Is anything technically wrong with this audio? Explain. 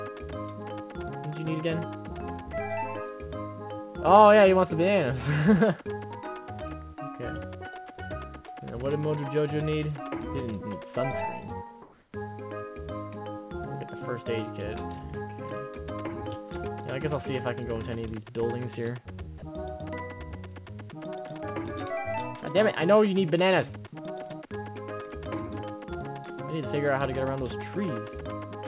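Yes, there are two brief faults, heard over a call path whose band stops at 4 kHz, as a G.711-type codec would leave it.

Comfort noise in place of the background, 11.82 to 12.12 s: for 300 ms the real background, already about 39 dB below the loud parts, turns smooth and featureless, about 2 dB different in level. The sender has likely stopped transmitting during the pause and the receiver synthesised noise. On a spectrogram the texture flattens into an even, grainy band; the waveform envelope goes unnaturally steady.

Sound dropped by the voice detector, at 19.38 to 19.42 s: a 40 ms stretch of steady noise replaces the sound, losing about 30 ms of it, as though the detector misread quiet sound as background. The spectrogram shows a thin vertical gap filled by uniform noise, and the waveform shows a short, flat, low-level notch.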